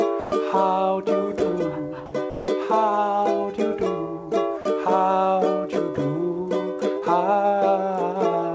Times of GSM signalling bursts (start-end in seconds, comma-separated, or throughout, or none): none